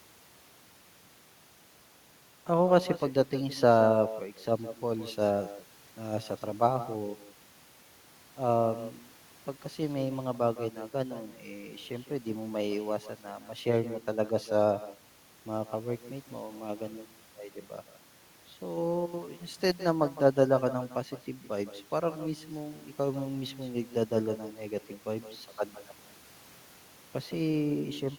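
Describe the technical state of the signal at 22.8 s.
At 22.8 s the speech carries an echo with no canceller, present throughout the clip rather than at that moment alone. The far end's loudspeaker feeds the talker's voice into its own microphone, and nothing subtracts it, so each phrase returns around 150 ms later, about 14 dB down and thinner. Unlike ordinary room reverberation, which smears into a smooth decay, this is a distinct delayed copy trailing the original.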